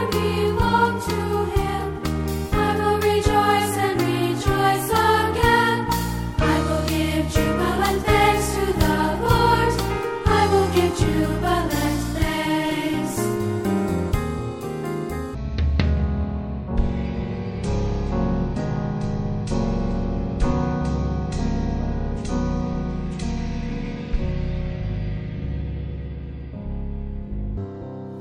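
At 2.58 s a bit error spike lands on a single sample: one flipped bit in memory or on a digital link throws the value out by a power of two and straight back. It is heard as one sharp tick, showing as a lone vertical needle in the waveform and a thin full-height line on the spectrogram.

From 15.35 s to 27.57 s comes a section at the wrong speed, played at 0.523 times its proper rate, likely because it was fitted to the wrong clock. Pitch drops by about ten semitones and everything drags, deep and slow. The spectrogram's energy shifts downward and stretches out in time.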